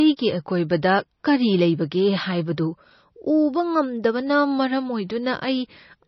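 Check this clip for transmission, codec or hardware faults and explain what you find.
One codec fault runs through the whole speech clip: heavy MP3 compression, likely. Nothing sounds above 5.9 kHz, where the starved encoder cut the treble. Weak spectral lines dropping in and out between frames give a watery, swirly texture, which fits a bitrate around 26 kbps.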